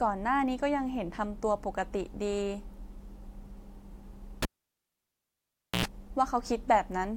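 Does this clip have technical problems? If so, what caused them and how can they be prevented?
Yes. A cable pulled and plugged in occurs from 4.42 s to 5.85 s. A pop marks the connector leaving its socket, and the speech drops to near silence for about 1.38 s. As the plug goes back in, only its tip touches at first, giving a 92 ms burst of 60 Hz mains buzz before the ground connects, then a second pop as the sound returns. To prevent this, mute the channel before handling cables and use locking connectors that stay fully seated.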